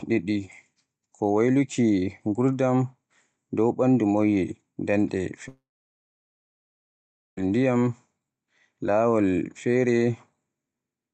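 From 5.48 s to 7.38 s the speech breaks off. The last sound is drawn out briefly as a fading buzz, and then nearly 1.8 s of silence follows before the speech resumes partway along, with that stretch of about 1.9 s simply gone. This is a long network dropout, likely caused by packets failing to arrive, so the receiver padded the gap by extending and fading the final sound. Throughout the clip, content above 8 kHz is absent, consistent with a call codec's bandwidth limit.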